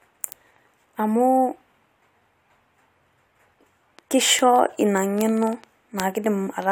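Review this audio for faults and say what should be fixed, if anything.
Bit error spikes appear at 0.32, 1.24, 4.39, 5.21 and 6.00 s. Each is a single sharp, broadband tick with no relation to the speech. Its extreme brevity fits a flipped bit in one to three consecutive samples, which throws the value by a power of two before it snaps back. Peaks reach about -8 dBFS at 0.32 and 4.39 s, about -21 dBFS at 1.24 s, and about -2 dBFS at 5.21 and 6.00 s. Prevent this by using error-checked memory and links, and verifying checksums on transfer.

A train of clicks runs from 3.99 s to 6.63 s. It is a series of similar-shaped pops at an uneven pace averaging 5.3 per second, around fifteen in all, peaking roughly level with the speech. The clicks continue through pauses, so they sit on top of the signal rather than coming from it. The likely cause is interference from nearby equipment or a faulty connection or power supply injecting pulses. 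Prevent this by isolating the interface, checking grounding and cabling, and moving away from noisy equipment.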